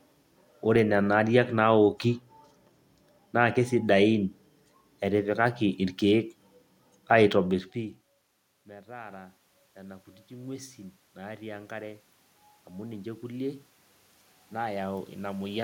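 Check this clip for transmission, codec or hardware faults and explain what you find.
One hardware-side fault stands out: automatic gain rising, from 8.67 to 12.07 s. After the talker moves away around 7.5 s and the input drops by about 23 dB, the gain control slowly adds about 8 dB. Voice and room noise swell together, unlike a talker moving, which leaves the background level unchanged.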